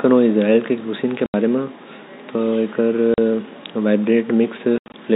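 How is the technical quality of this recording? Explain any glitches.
The speech has three dropouts from packet loss filled with silence. They are at 1.26 to 1.34 s, 3.14 to 3.18 s, and 4.78 to 4.94 s. Lost packets were replaced by silence. The gaps are 80, 40 and 120 ms, which fits 20 ms packets. The last one is broken up over 160 ms. Each gap has hard edges. The telephone band, with nothing above 4 kHz, comes from the G.711 coding.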